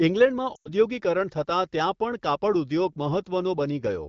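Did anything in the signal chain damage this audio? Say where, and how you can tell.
Yes: the damage happened on the radio link, where lost AMR speech frames disrupt the speech from 0.55 to 0.70 s. Instead of a hard gap, the sound there carries on briefly and drops to near silence within two frames, with a brief rough onset as speech resumes. That is the AMR-WB decoder extrapolating its last good pitch and vocal tract parameters at falling gain across a 100 ms hole, which fits about five 20 ms frames. A buffer dropout would instead cut to abrupt silence or click.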